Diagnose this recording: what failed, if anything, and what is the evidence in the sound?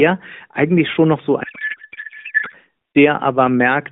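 The codec stage failed: a codec payload misread from 1.44 to 2.56 s. The speech turns into garbled warble and noise that barely follows it. That fits AMR frames packed octet-aligned but decoded as bandwidth-efficient, so every field lands in the wrong place. Packet loss would instead give gaps or smeared concealment.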